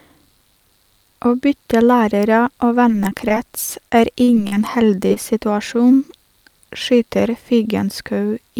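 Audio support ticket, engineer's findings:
Repeated packet loss (robotic sound), 2.88–3.37 s and 3.90–4.57 s. Choppy speech with pieces missing. Probable component: network path into jitter buffer/decoder. Repeated holes patched by extending prior audio. Second burst worse: longest gap 40 ms, around 18% of span concealed.

Short concealed packet loss, 5.08–5.11 s and 5.13–5.17 s. Brief smear and wobble, closely paired. Probable component: decoder loss concealment. Roughly 20–30 ms missing each time, filled by continuing the last sound, then crossfaded back into real audio.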